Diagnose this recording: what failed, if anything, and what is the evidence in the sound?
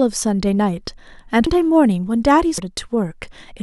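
Compressed frames skipped at the codec stage: at 1.47 s and 2.58 s, speech jumps ahead about 0.2 s with no silent gap.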